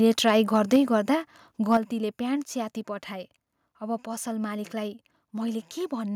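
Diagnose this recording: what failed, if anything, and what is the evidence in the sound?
Microphone overload at 0.28–0.31 s, 0.73–0.76 s and 1.73–1.76 s: short, harsh crackles on the loudest speech peaks, about 2 to 3 dB past full scale. The one at 0.73 s is the worst, with a sizeable share of the peak flattened. The likely cause is input gain set too high ahead of the converter, so the waveform tops are sheared off.

Microphone volume stepped down at 0.76 s and 1.77 s: speech and background fall together by about 3 dB, then about 6 dB, each immediately after a distorted peak. This points to call processing, likely automatic gain control cutting the device's input volume in single steps.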